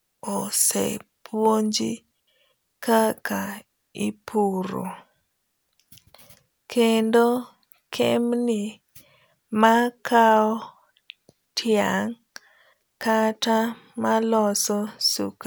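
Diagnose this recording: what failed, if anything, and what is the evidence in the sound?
A digital wireless dropout runs from 2.20 to 2.27 s, cutting the speech for about 77 ms. The fault sits in the wireless link, the network stage. Too much data was lost, so the receiver muted with a very short fade, leaving a clean near-silent hole with no noise burst on either side.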